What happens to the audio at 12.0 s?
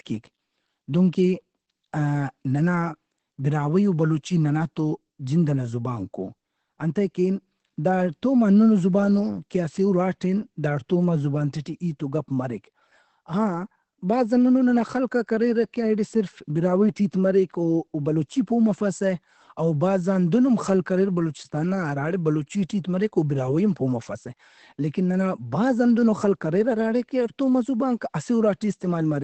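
At 12.0 s the speech sounds the way it does across the whole clip: muffled and hoarse, with nothing above about 8.4 kHz. That's likely Opus compression running in its speech-oriented SILK mode at a very low rate, something around 12 kbps. With so few bits, the encoder keeps only wideband audio and models the voice coarsely, so the top end is cut off and what's left has that rough, heavily compressed edge.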